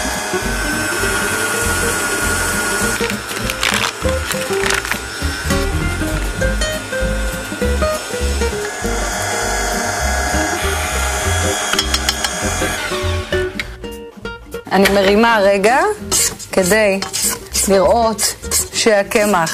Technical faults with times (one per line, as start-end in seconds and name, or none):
0.00-19.54 hard clipping